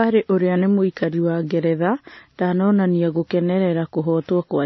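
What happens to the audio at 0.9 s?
At 0.9 s the speech carries a mix of different codec artefacts heard together, with nothing above 5.9 kHz, as throughout the clip. This is likely transcoding between lossy codecs, a low-rate MP3-style stage followed by WMA. Unlike a single codec, two different artefact textures are heard together.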